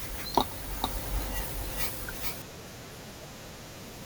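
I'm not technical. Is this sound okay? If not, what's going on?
No. Between 0.84 and 2.42 seconds the speech plays twice, an equally loud copy trailing roughly 0.4 seconds behind. This is a doubled audio track, likely from a slower second recording path.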